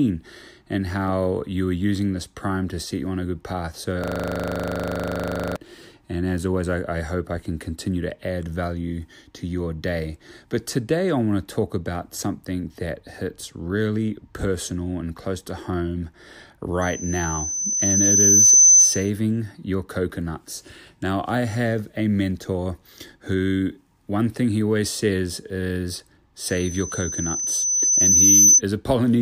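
System hang loop from 4.04 to 5.56 s: playback froze and one 40 ms slice of the speech repeats about 38 times, a rattling 25 Hz buzz.

Loudspeaker feedback squeal from 16.81 to 19.10 s, just before "your coconuts", and from 26.45 to 28.61 s, right after "he always says is". In both, a 6.1 kHz tone recirculates through the microphone, swelling over about two seconds to about 15 dB above the speech.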